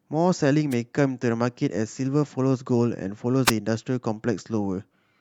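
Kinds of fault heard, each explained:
Wireless microphone noise hit: The radio link from an analogue FM microphone briefly fades when reflected signals cancel at the receiver. As the signal drops, the receiver's own noise comes up over the speech. Here it is heard twice as a short swish of static. The first burst runs from about 0.71 to 0.75 s, roughly 40 ms. The second runs from 3.45 to 3.52 s, about 64 ms long.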